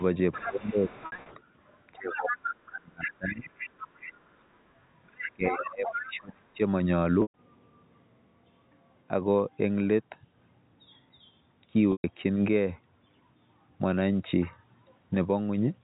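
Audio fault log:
0.0–1.43 s, 2.0–2.54 s, 3.02–4.34 s, 5.03–6.11 s: other side's voice leaking through. A second voice sits underneath, about 15 dB down in the first and third stretches and about 10 dB down in the second and fourth. It's likely loudspeaker echo the canceller didn't fully strip from the mic.
0.46–0.91 s, 1.96–3.5 s, 5.34–6.6 s: speech suppressed in double talk. The main voice sinks while the other side is talking, by about 15 dB in the first patch and around 30 dB in the later two, over a few hundred milliseconds to a second and a half. Likely the canceller ducking both sides when it couldn't tell them apart.
1.06–1.26 s, 7.22–7.34 s, 11.92–12.04 s: packet loss with pitch repetition. Each spot loses 120 ms, which fits about six 20 ms packets. The first is scattered over 200 ms with runs of up to 60 ms, so it's short buzzy holds on a repeated pitch cycle. The other two are solid gaps that fade out, go quiet, then cross-fade back in. 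The band limit near 4 kHz from the telephone coding is just the normal G.711 path.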